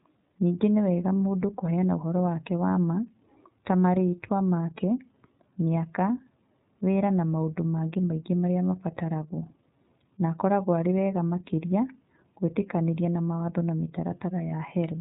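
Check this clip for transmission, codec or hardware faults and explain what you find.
The speech runs through the iLBC codec for its whole length. Nothing above about 3.8 kHz survives, so the sound is narrowband and dull. Each 30 ms frame's excitation is coded on its own, which fits a rate near 13.33 kbps, and the damage is plainly audible as a rough, synthetic edge.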